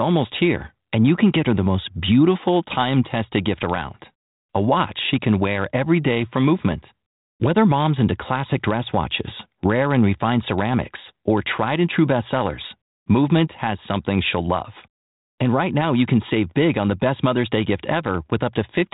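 Speech with no technical faults.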